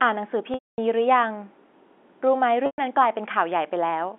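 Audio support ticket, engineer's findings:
Packet loss with pitch repetition, 0.54–0.78 s and 2.66–2.78 s. Symptom: brief buzzy held tone, decaying to silence, then a soft cross-fade back into speech. Gaps of 240 ms and 120 ms fit runs of 20 ms packets. Component: receiver concealment repeating the last pitch period. Differs from a plain dropout by the buzzy tail before silence, and from a stutter because no syllable is replayed. G.711 band-limit (250 Hz–3.5 kHz) is expected line behaviour.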